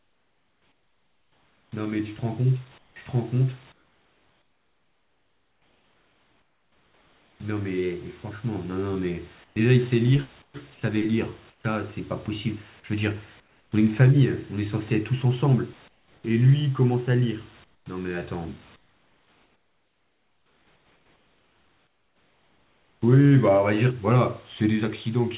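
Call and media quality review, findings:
Comfort noise in place of the background: room tone in speech pauses turns steady and featureless, about 9 to 17 dB quieter, at 0–1.72, 2.78–7.4, 9.44–9.56, 10.42–11.64, 13.4–13.72, 15.88–16.24, 17.64–17.86, 18.76–23.02 s. Likely sender discontinuous transmission, with the receiver synthesising noise. Audio above 4 kHz is absent, consistent with a narrowband call codec.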